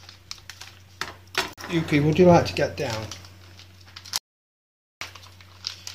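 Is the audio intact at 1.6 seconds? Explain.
No. A gap between stream segments runs from 1.53 to 1.58 s: mismatched segment timestamps leave a 42 ms hole, heard as a hard-edged silent dropout.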